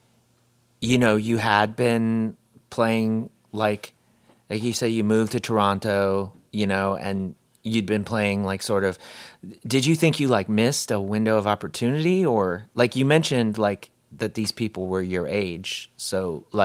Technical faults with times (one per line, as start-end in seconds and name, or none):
none